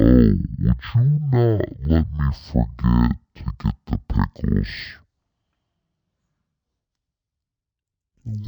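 Speech plays throughout at half speed and an octave low, a 12-semitone drop. This is stereo read as mono. Left and right samples were taken in turn as one channel. That doubles the length and halves every frequency. A faint mirrored copy also sits high in the spectrum.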